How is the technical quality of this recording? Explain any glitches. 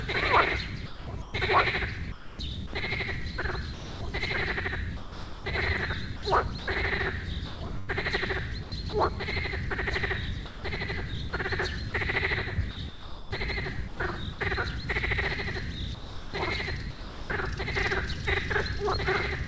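The recording has a recurring chopping fault, sound chopped by the voice detector, in four stretches: 0.86 to 4.01 s, 4.97 to 8.93 s, 10.46 to 14.39 s, and 15.95 to 17.30 s. The audio, which carries nothing above 8 kHz as expected for a wideband call path, is most likely passing through a voice detector on the sending side that repeatedly misjudges quieter moments as silence and stops transmitting. The receiver fills those moments with synthetic comfort noise, about 0.93 s, 0.99 s, 0.9 s and 0.78 s of it in the four stretches. As a result, softer parts of the sound drop out, giving each stretch a choppy texture.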